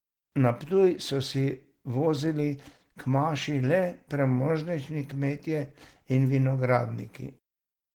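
Opus voice compression runs through the whole speech clip. The damage is plainly audible, which fits a low bitrate around 16 kbps. The encoder splits the band, with linear prediction below 8 kHz and a coarse transform layer above, reaching 20.2 kHz. Speech sounds hoarse, slightly robotic.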